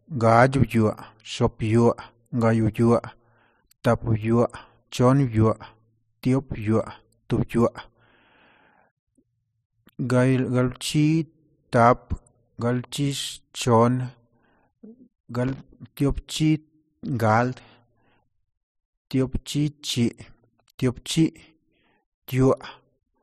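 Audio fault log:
15.47–16.01 s, loose connector crackle: an irregular burst of crackle and scratching lasting about half a second. A worn or dirty contact in the signal path is making and breaking as it shifts, chopping the speech on and off, and any DC on the line turns each break into a pop.
17.04–22.66 s, periodic clock jitter: the speech takes on a rough, metallic edge that drops away whenever it pauses. Interference around 100 Hz is wobbling the converter clock, which places sidebands that far above and below every component of the sound, and the effect is strongest on the highest frequencies.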